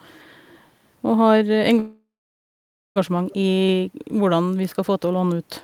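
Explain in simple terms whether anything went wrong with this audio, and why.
A call audio freeze runs from 1.79 to 2.98 s. The sound stalls, then goes silent for almost a second, and resumes unclipped. Delayed packets likely emptied the jitter buffer.

An echo leak at 3.30 to 3.34 s adds a faint, brief copy of the speech about 0.24 s late, likely from a loudspeaker whose echo canceller missed it.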